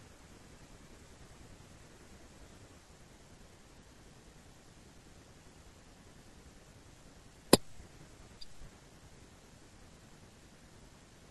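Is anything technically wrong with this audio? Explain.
Yes. At 3.78 s there is damaged data in the compressed stream: corrupted bytes make the decoder misread a frame and resynchronise, giving a brief glitch. A waveform shows a sudden discontinuity; a spectrogram shows a thin vertical smear of broadband energy.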